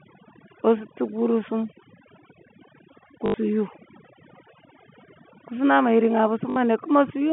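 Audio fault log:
Throughout: overdone noise removal. The background drops and breaks up into little twinkling specks. The suppressor is pulling individual frequency bands right down whenever they sit near its noise estimate, taking the quieter parts of the voice along.
3.26 to 3.34 s and 6.50 to 6.56 s: packet loss with last packet repeated. Two short robotic stutters, about 80 ms and 60 ms long. The receiver kept replaying the last good chunk. The buzz sits near 50 Hz, which fits 20 ms packets.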